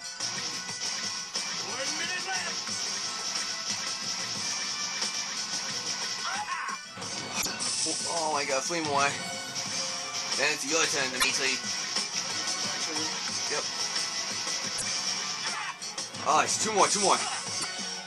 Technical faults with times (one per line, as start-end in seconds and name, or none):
7.38-7.46 damaged data in a compressed stream
11.17-11.25 damaged data in a compressed stream
14.75-14.83 damaged data in a compressed stream
17.57-17.65 damaged data in a compressed stream